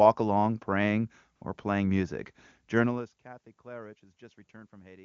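From 1.35 to 1.41 s, between "along praying" and "or playing music", AMR comfort noise replaces the signal for 60 ms: the phone stopped sending speech frames, so the receiver substituted smooth synthetic hiss, seen as a flat, featureless band on the spectrogram and a low, even waveform.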